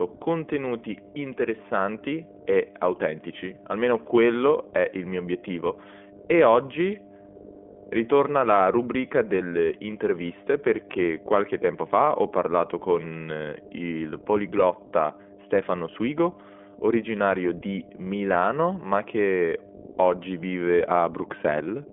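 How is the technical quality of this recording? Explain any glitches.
The technical quality is poor. Two faults run through the whole speech clip.

Mains hum is present from start to finish. A steady 50 Hz tone sits well under the speech, at about 15 dB below it, which points to a ground loop or a nearby transformer feeding the power line into the signal. On a spectrogram it shows as an unbroken horizontal line at 50 Hz across the full width.

The iLBC codec shapes everything as well, and its damage is plainly audible. The band runs from 250 Hz to 3.4 kHz with nothing above 3.7 kHz, so the speech sounds thin, rough and slightly synthetic, which fits a bitrate of about 15.2 kbps. Each 20 ms frame is coded on its own. On a spectrogram the energy stops at a hard ceiling.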